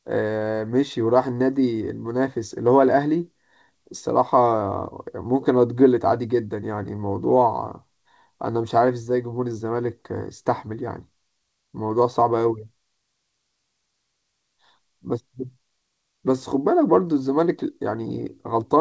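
No technical faults can be heard.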